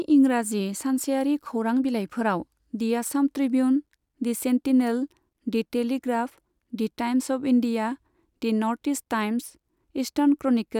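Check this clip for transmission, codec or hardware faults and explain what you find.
No faults detected in this recording.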